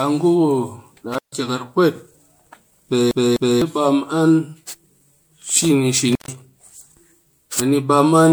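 Swirly, smeared and hollow throughout, this speech recording has blurred consonant attacks and a watery texture in the upper range, even though content still reaches up to about 20 kHz. That points to generation loss, most likely from the audio passing through MP3 encoding at around 96 kbit/s a few times over. Each re-encode quantises again on a shifted frame grid, so the noise and spectral gaps pile up beyond what a single pass at that rate would leave. At 1.12 to 1.33 s the sound drops out for about 140 ms, with crackle on either side of the gap and only faint hiss inside it, and the same thing happens at 6.12 to 6.28 s with a gap of about 131 ms. This is intermittent contact, a loose plug or cable briefly breaking the signal path, where the scrape of the contact opening and closing makes the crackle. From 3.11 to 3.62 s a 252 ms fragment plays twice in a row with a tiny mute at each jump, giving a fast, even stutter. 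That is a CD stuck on one turn: a scratch knocks the laser back to the same track on each revolution, so the same slice of audio repeats until the player gets past it.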